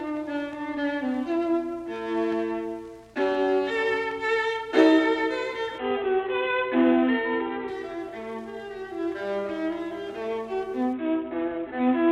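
From 5.78 to 7.68 s, and again from 10.93 s to the end, the treble dulls and a gritty noise rises: a Bluetooth SBC bit pool drop. Link congestion forced a much lower bit pool, consistent with roughly 54 kbps, starving the upper sub-bands.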